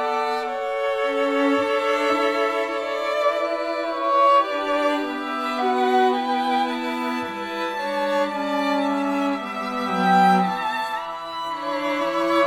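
No technical faults can be heard anywhere in this recording.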